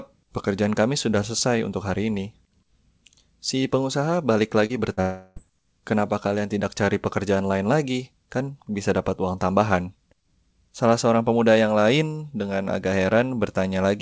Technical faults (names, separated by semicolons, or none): short concealed packet loss; long network dropout